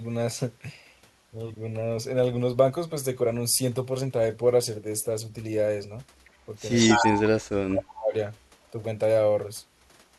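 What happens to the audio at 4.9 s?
Nothing goes wrong at 4.9 s: the speech runs on through that moment without any break, dropout or distortion.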